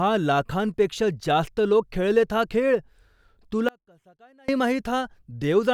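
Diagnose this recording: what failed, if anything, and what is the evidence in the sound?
The speech has an audio dropout to a faint residue running from 3.69 s to 4.48 s, roughly 0.8 s. The level falls abruptly rather than fading, and what's left in the gap is a faint leak of the sound, something like 30 dB down. Then it snaps back. Because the path after the break stayed live, the likely culprit is an intermittent analogue connection upstream, such as a cable or contact briefly losing the main feed.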